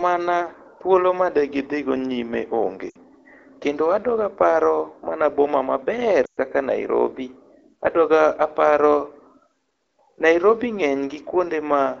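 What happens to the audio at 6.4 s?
Lost AMR speech frames from 6.25 to 6.40 s, just after "aparo mana boma maber": about 120 ms of frames failed their checksum, which fits six 20 ms frames. The AMR-WB decoder recycled its last good pitch and vocal-tract settings at falling gain, so the speech smears briefly, fades quickly toward silence, and returns weak and rough.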